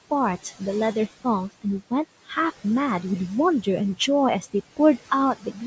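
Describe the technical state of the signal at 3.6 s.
At 3.6 s the noise suppressor artifacts present throughout the clip are active. The suppressor attenuates bands it judges to be steady noise frame by frame, cutting the room noise by about 17 dB, so the background drops between words and rises back under them.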